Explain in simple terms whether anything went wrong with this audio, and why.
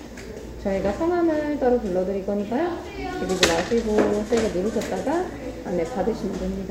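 Nothing went wrong here.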